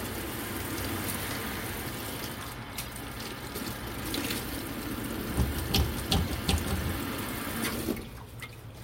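At 2.80 s a corrupt frame decoded produces a short burst of misplaced energy lasting about 0.15 s, peaking at about -30 dBFS. Damaged bits in the compressed stream were played through, so wrong gains and misread spectral codes put energy at incorrect frequencies, heard as a chirpy noise blip. The length suggests several consecutive frames were affected. A second, shorter event at 6.24 s lasts about 0.05 s, peaks louder at about -25 dBFS, and fits a couple of frames.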